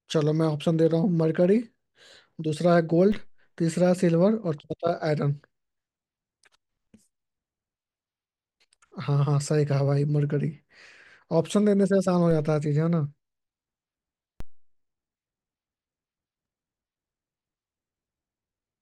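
A low thump cuts into the speech at 3.12 s, 12.31 s and 14.40 s. Each is a DC step: the waveform's zero line jumps by about -28 dBFS, about -26 dBFS at the last, then decays away through a high-pass near 2 Hz.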